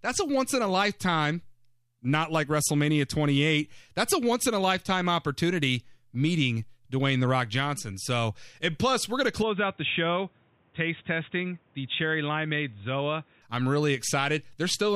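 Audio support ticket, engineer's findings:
9.42–13.42 s: sound abruptly narrows and dulls, no gap at the change, level drops a few dB, fresh background noise well below the signal. Spectrogram: upper band cut off, then full band returns. Likely input switched to a poorer device.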